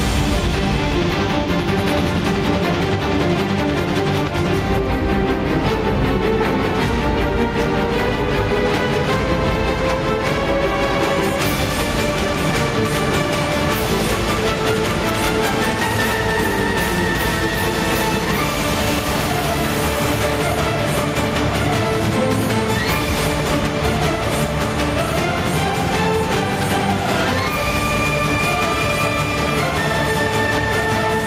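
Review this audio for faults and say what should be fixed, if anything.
The level pumps for the whole clip. That is gain pumping: the level breathes by around 10 dB, and loud and quiet passages sit squashed closer together in level. The likely cause is input gain set far too high for the microphone, with a fast limiter or compressor clamping down on each peak and releasing in the pauses. To prevent it, lower the input gain so peaks clear the limiter, and keep any compression gentle with a slower release.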